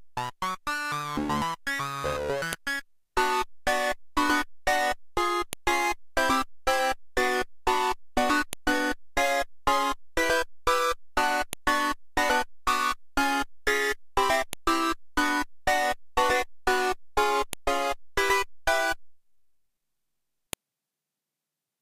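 A sharp, loud click snaps through the sound at 2.53, 5.53, 8.53, 11.53, 14.53, 17.53 and 20.53 s, every 3 s regardless of the signal. This is a file header played as audio: 3 s pieces were joined with their header bytes left in, so they play as samples.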